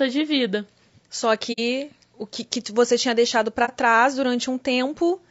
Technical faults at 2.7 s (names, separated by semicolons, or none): low-delay AAC compression